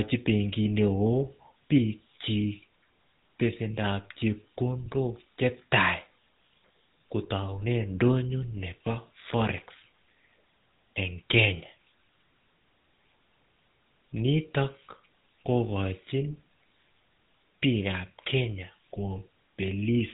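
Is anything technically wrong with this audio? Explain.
Yes. The speech carries GSM full-rate codec damage from start to finish. This telephone-era codec models the vocal tract as a filter and drives it with a coarse, regularly spaced pulse excitation, discarding much of the fine detail. That leaves a plainly audible buzzy, gravelly roughness, with a density that fits a 13 kbps GSM coder. On a spectrogram, energy stops at a hard ceiling around 3.8 kHz with nothing above it, and harmonics look smeared and grainy.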